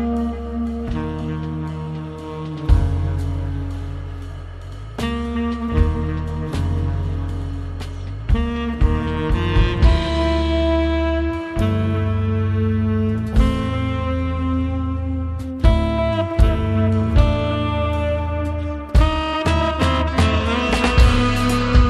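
No faults can be heard anywhere in the recording.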